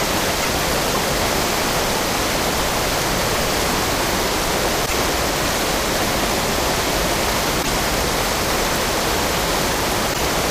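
At 0.41–0.49, 4.85–4.93, 7.62–7.70 and 10.12–10.20 s the sound skips forward, and roughly three 26.1 ms frames come out as a chirp, a burst of noise or a short hole. This is likely a broken MP3 bit reservoir after lost frames.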